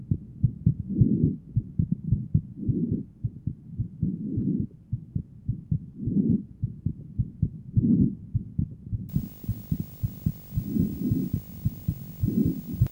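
Video or display buzz enters at 9.09 s and runs to the end: a 50 Hz field-rate buzz with hash, about 20 dB below the sound, plus a 15.6 kHz line tone. On a spectrogram these show as stacked 50 Hz harmonics and a thin horizontal line near 15.6 kHz.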